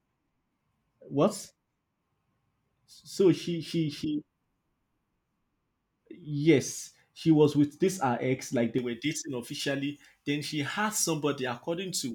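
From 8.79 s, after "her ex like they", pre-emphasis is left on: an uncorrected treble boost lifts 10 kHz about 11 dB, leaving the speech thin, bright and sibilant.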